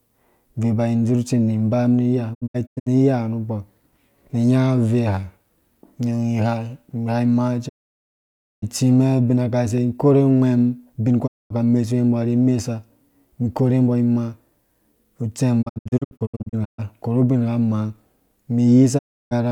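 Digital broadcast dropouts cut the speech at 2.33, 7.68, 11.26, 15.61 and 18.97 s. Bad frames mute the receiver behind a 20 ms fade. Missing audio totals 0.22 to 0.93 s per event. At 2.33 and 15.61 s, several short holes scatter. Sound returns on "ka mesuwe mbɔ ri" and "korhu bingha".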